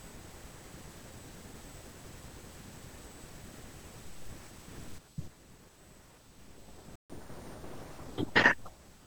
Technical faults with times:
0.00-9.06 USB whine
4.98-9.06 sudden gain jump
6.96-7.10 playback stall
7.10-8.04 catch-up at higher speed

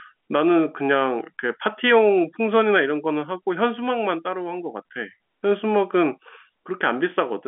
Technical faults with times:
none

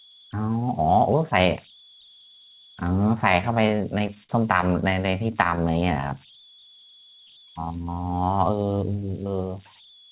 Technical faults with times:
0.00-10.11 converter idle tones
3.32-6.12 repeated stalls (stutter)
8.29-9.10 jitter buffer speed-up

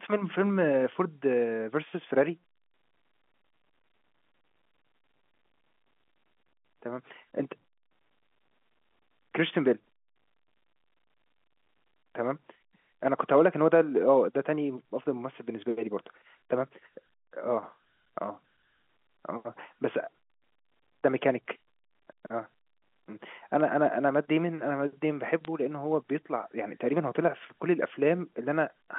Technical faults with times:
25.45 bit errors on a digital phone line

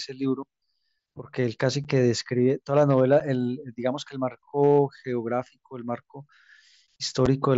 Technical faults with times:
1.84 unconcealed Bluetooth headset packet loss
3.20 unconcealed Bluetooth headset packet loss
7.26 unconcealed Bluetooth headset packet loss

